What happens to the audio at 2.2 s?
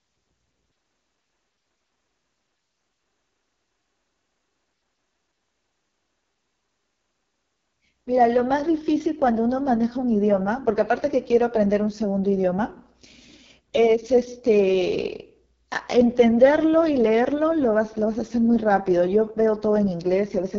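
At 2.2 s the speech is passing through an AMR wideband (HD Voice) codec at a starved rate, which fits its lowest 6.6 kbit/s mode, as it does throughout. The vocal-tract model is coarsely coded, so the voice sounds rough and raspy, with nothing above 7 kHz.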